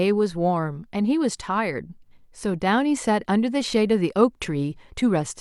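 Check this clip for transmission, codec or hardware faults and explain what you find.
Nothing here points to a transmission, codec or hardware problem; the speech comes through without any fault worth flagging.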